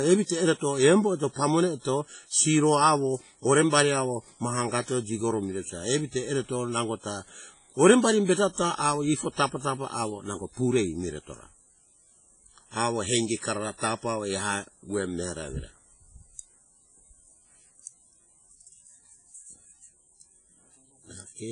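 WMA compression runs through the whole speech clip, from start to finish. Nothing is present above 10.4 kHz, and the heavy smearing and ringing around each syllable, with a hiss that swells and fades along with the signal, are likely the work of a transform codec such as WMA squeezed to a low rate, which fits roughly 24 kbps. Its long blocks spread quantisation noise over tens of milliseconds, and weak spectral lines have been zeroed, leaving a washy texture.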